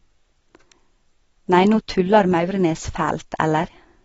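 From start to finish, the speech sounds dull and smeared. Nothing reaches above 7.7 kHz, so sibilants lose their edge. The damage is plainly audible. Sustained sounds warble, and the hiss of consonants turns fizzy. This is likely AAC compression, in the AAC-LC form, which quantises each frame's spectrum against a hearing model. Starved of bits, it drops the top band and leaves gaps in what remains. The sound points to a low bitrate, around 24 kbps.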